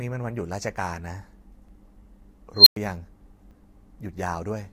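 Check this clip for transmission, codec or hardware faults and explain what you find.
Three faults are audible in the speech, two short skips and one runaway tone.

At 1.69 s and 3.51 s the sound jumps ahead, losing a few milliseconds and then about 10 ms. This is likely a dropped buffer (overrun), where samples were overwritten before being read and the edges were spliced together. The waveform shows an abrupt discontinuity with no gap.

From 2.55 s to 2.76 s an unstable filter runs away. A tone around 4 kHz swells for about 0.11 s as the recursive feedback grows unchecked, then overflows and the sound drops out for about 0.1 s. On a spectrogram this appears as a brightening horizontal line ending in a blank strip.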